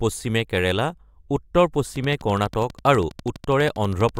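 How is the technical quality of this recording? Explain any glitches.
The recording has one clear technical fault: a train of clicks in the second half.

From 1.96 s to 4.18 s, a steady ticking sits over the speech. The clicks come at about 12.2 per second, evenly spaced, roughly thirty in all. Each has much the same sharp shape. They peak at roughly the level of the speech itself, so they stay prominent and carry through the pauses too. The likely cause is interference from nearby equipment or a faulty connection or power supply injecting repeated pulses.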